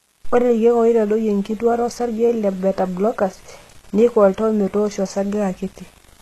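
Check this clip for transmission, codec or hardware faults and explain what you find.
Two faults run through the whole speech clip: coarse quantisation and low-rate codec damage.

Low bit depth without dither is present from start to finish. The grit follows the speech, with error noise roughly 30 dB below it, which fits rounding to about 7 bits with no dither. That is the likely cause, so quieter passages turn grainy rather than clean.

HE-AAC compression damage is plainly audible throughout, likely from coding at around 16 kbps. The codec keeps only the lower spectrum and rebuilds the treble from copied lower bands, with nothing above 12.3 kHz, so s sounds come out gritty, metallic or lispy.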